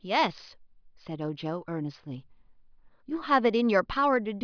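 No technical faults occur at any point in the speech.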